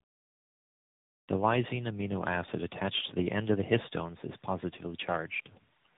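Tandem speech coding runs throughout the speech: it passed through about three speech coders in a row, each re-encoding the previous one's degraded output. The result is rough, muffled and warbly, with nothing above 3.8 kHz, which fits narrowband AMR-style coding.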